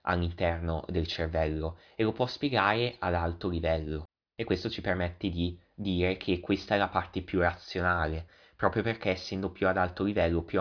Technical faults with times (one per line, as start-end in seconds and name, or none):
none